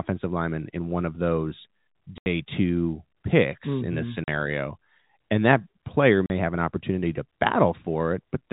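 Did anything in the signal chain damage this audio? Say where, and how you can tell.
Yes, at the network stage: packet loss filled with silence. The speech drops to dead silence for 80 ms at 2.18 to 2.26 s, between "in one of those" and "two picks", then for 40 ms at 4.24 to 4.28 s and at 6.26 to 6.30 s, between "that player" and "have an opportunity to". Each gap has hard edges, and the lengths all divide evenly by 20 ms, which fits lost 20 ms packets. The receiver simply played nothing where the missing packets should have been. That sets it apart from concealment, which would fill the holes with a smeared or repeated copy of the last sound, and from a dropout in analogue wiring, whose gaps would not share a packet-length step. The G.711 telephone coding stays band-limited to 4 kHz throughout and does not cause these gaps.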